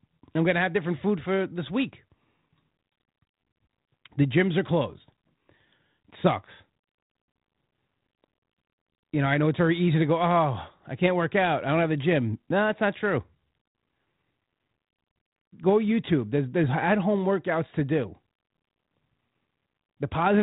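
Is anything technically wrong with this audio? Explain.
No, nothing in this speech recording points to a technical fault. It comes through a G.726 ADPCM path at 32 kbit/s, which limits it to telephone bandwidth below 4 kHz and adds only a light, level-following graininess.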